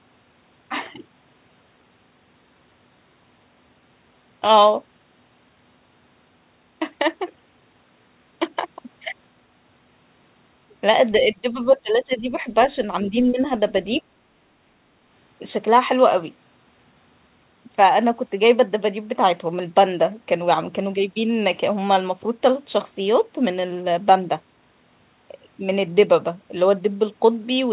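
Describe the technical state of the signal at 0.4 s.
At 0.4 s the signal is intact, with no fault present; the speech carries the narrow telephone band of the call path, with nothing above 4 kHz, which fits G.711 mu-law coding at 64 kbps.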